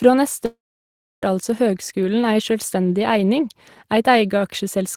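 At 0.45 s the speech stops and does not properly resume until 1.23 s. This gap is a long network dropout. The likely cause is that no audio reached the receiver for about 0.77 s. For a moment, the final sound before the break carries on as a fading buzz. About 0.66 s of near silence follows. When speech returns, it jumps ahead, and the lost portion is never heard.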